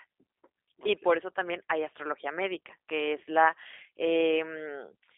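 Throughout, the speech carries G.729 codec damage: band-limited to roughly 300 Hz–3.6 kHz, rough and synthetic from pulse-based reconstruction, consistent with an 8 kbit/s G.729A link.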